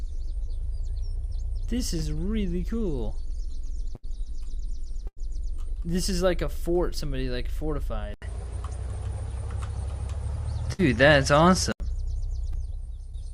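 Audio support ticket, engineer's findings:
Burst of packet loss at 3.95–4.05 s, 5.07–5.19 s and 10.73–10.80 s. About 80, 100 and 60 ms of audio missing. Held buzz or fading hiss, then a jump forward. Packets lost or arrived too late to play. The receiver extends the last sound, ramps it down, then resumes later in the stream. The in-between audio is gone.

Input switched to a poorer device, likely a fallback microphone or headset call profile. Band-limiting from 8.14 to 11.8 s. Nothing above 11.7 kHz. Abrupt dull tone. An 80 ms silence at the switch. Level shift of about 5 dB. A new noise floor about 35 dB below the signal. Tone returns at 11.8 s.

Short concealed packet loss at 12.52–12.56 s. About 20 ms missing. Brief smear or wobble. Decoder packet loss concealment synthesised roughly 12 ms of fill from the preceding pitch or shaped noise, then crossfaded into the real audio.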